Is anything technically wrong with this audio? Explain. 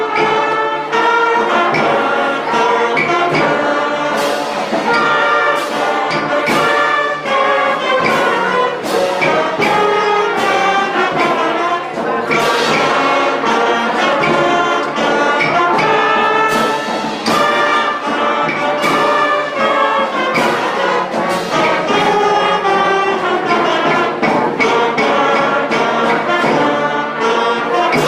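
No, nothing technically wrong is audible anywhere in this audio.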